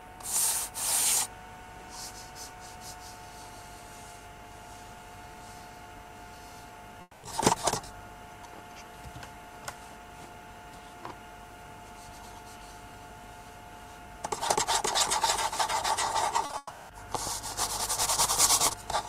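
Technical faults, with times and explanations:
7.01–7.25 s, long network dropout: about 220 ms of sound went missing and was bridged by continuing the last sound, likely from a network outage. That fill fades to near silence for its final 30 ms. On a spectrogram the earlier texture smears into a flat, decaying band before a brief dark gap, and the waveform shrinks toward zero before the sound resumes with that stretch lost.
16.45–16.91 s, repeated packet loss (robotic sound): four gaps in under half a second, the longest 180 ms, with about 78% of the span patched by repeating the last sound. The result is choppy, with pieces missing. The spectrogram shows repeated smeared, stripe-like blocks, and the waveform shows uneven, looping chunks.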